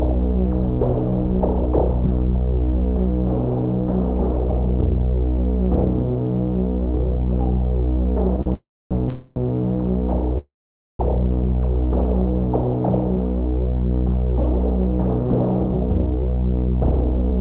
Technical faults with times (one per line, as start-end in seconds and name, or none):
8.41-8.48 short stall from a late packet
8.54-9.38 call audio freeze
10.38-11.01 call audio freeze